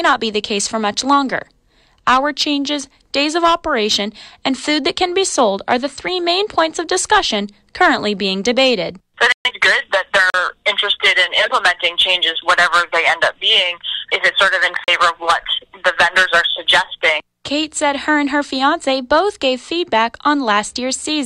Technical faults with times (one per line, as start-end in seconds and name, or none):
9.32-9.51 digital broadcast dropout
10.30-10.34 block of digital silence
14.84-14.88 block of digital silence